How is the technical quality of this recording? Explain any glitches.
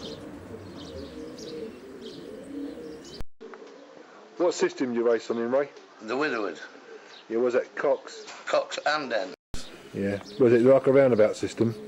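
One glitch stands out: a change of input device partway through. From 3.21 s to 9.54 s the audio turns duller and roughly 10 dB quieter. Nothing passes above 7.6 kHz, and a fresh noise floor appears a good way below the signal. A 200 ms silence at the first switch points to the recording likely jumping to a poorer input. Because level, tone and noise all change together, this is not simple filtering.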